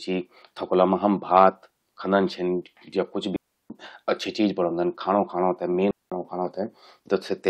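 Two digital wireless dropouts break this speech, the first from 3.36 to 3.70 s (about 340 ms) and the second from 5.91 to 6.12 s (about 210 ms). In each case the radio link lost more data than the receiver could conceal, so it muted the output with a very quick fade. Both sound like clean holes of near silence cut into the speech, with no crackle or noise burst at either edge.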